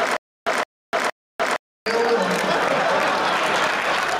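Stutter with silent gaps runs from the very start to 1.86 s: a 166 ms burst of sound repeats three times, every 466 ms, with 300 ms of dead digital silence between. The likely cause is a stalled stream replaying its last fragment, and the audio due then is lost.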